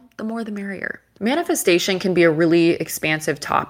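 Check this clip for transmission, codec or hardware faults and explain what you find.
One fault stands out, an automatic gain rising between 0.19 and 2.32 s. The automatic gain control judged the input too quiet and raised its gain gradually by about 8 dB, so the speech and the background noise swell together across those two seconds rather than staying at a steady level.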